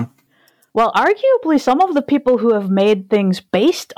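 Hard clipping runs through the whole speech clip. The signal was driven about 7 dB past what one stage could pass, so a small share of samples, around two percent, had their peaks sliced flat. Those flattened tops add high harmonics, heard as crackle on the louder syllables.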